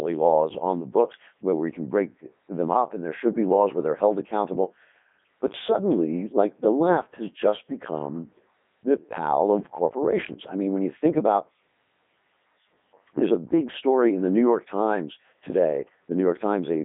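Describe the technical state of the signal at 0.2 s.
At 0.2 s the speech has passed through a Codec 2 vocoder, likely at 3.2 kbit/s, rebuilt from sine waves, so it sounds robotic and buzzy, with nothing above 3.8 kHz.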